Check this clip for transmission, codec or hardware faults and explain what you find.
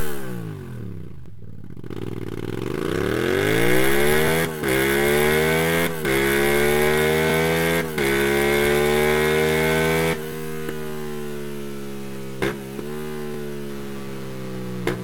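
Two faults are audible: overlapping chunks at regular intervals, and computer activity noise near the end.

Overlapping chunks, at 1.26–1.28, 4.28–4.30, 7.30–7.32, 10.32–10.34 and 13.34–13.36 s. The audio was handled in 3.0 s blocks, each starting about 21 ms before the previous block ended. That overlap plays twice at every join, giving a brief stutter or click every three seconds.

Computer activity noise, from 12.12 s to the end. Processor or other computer load is disturbing the audio circuit's shared ground. This shows up as a buzzy, chirping interference pulsing at roughly 150 Hz, sitting around 25 dB below the sound and tracking the machine's activity rather than the audio.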